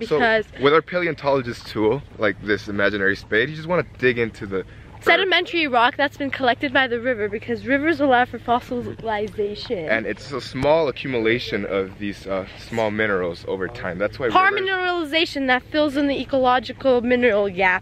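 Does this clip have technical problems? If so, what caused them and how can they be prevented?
Yes. A loud pop occurs from 10.63 to 10.65 s: a single sharp pop standing roughly 10 dB above the surrounding sound, which carries on underneath it. It is likely caused by a sudden voltage step or pulse, such as a connector being plugged in, a switch toggling, a static discharge or a driver glitch, which the downstream circuitry shapes into a brief click. Securing cables, muting before switching, and grounding equipment properly prevent such pops.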